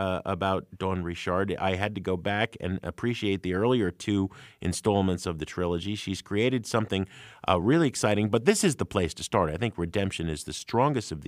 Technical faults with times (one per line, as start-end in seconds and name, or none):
none